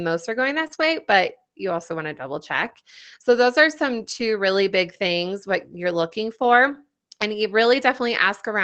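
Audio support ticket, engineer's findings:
Lost packet rebuilt from error correction: rougher, noisier stretches with no gap or dropout. Short ones at 0.63–0.65, 0.71–0.73 and 0.79–0.81 s, between "are going" and "way but you also". Longer ones at 2.53–2.71 s, right after "also want to double", and at 3.99–4.21 s. Opus in-band FEC: the decoder played the low-bitrate copy carried in the following packet. Continuous audio with only a quality drop separates it from concealment.

Short concealed packet loss: brief smear or wobble at 0.67–0.71 s and 0.75–0.79 s, in the same cluster between "are going" and "way but you also". Jitter buffer/decoder had nothing for about 20 ms each time, so it extended the preceding sound and blended back in. Audible as a smear or wobble, not just added grain.

The call path itself tops out around 8 kHz with coding noise, consistent with Opus wideband at roughly 24 kbps.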